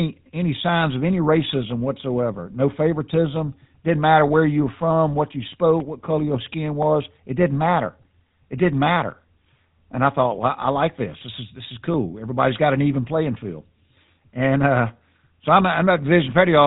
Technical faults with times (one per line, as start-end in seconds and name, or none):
0.00-16.66 GSM full-rate codec